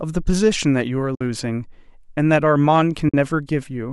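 A run of AAC frames was lost twice and the decoder muted them, a case of AAC frame loss with muting. It zeroed the missing spectrum, so the overlapping windows fade the speech out and back in. The holes run from 1.15 to 1.21 s, about 60 ms, and from 3.09 to 3.14 s, about 50 ms. That points to roughly five or six 10 ms frames each, likely from low-delay AAC. Each gap sounds like a soft-edged dropout.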